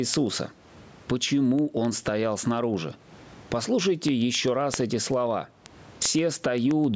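Gain pumping runs through the whole clip, with the gain swinging by roughly 20 dB. The likely cause is a microphone gain set far too high, with a fast limiter clamping it back down. Speech sounds squashed as a result.

From 0.14 s to 6.84 s there are word clock ticks, sharp and uneven, about every 0.15 s, some fifty in all. The receiving device runs on its own clock. It slips one sample at each crossing, which fits a clock mismatch of around 500 ppm.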